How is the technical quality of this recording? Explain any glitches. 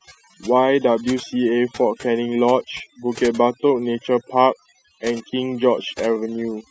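The recording suffers from overdone noise removal throughout. An overly aggressive denoiser cut frequency bands near its noise estimate, taking quiet speech detail too. The background drops and breaks up into twinkling specks. A spectrogram shows scattered isolated specks and patchy, gated harmonics.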